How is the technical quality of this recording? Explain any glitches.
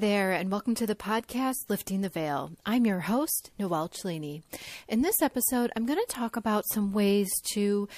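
There's one glitch worth flagging, a pre-echo at about 6.07 s: a brief hiss, about 10 dB up, arrives roughly 18 ms ahead of a sharp speech attack, softening it. The codec's 36 ms blocks, never switched to short ones, spread quantisation noise forward.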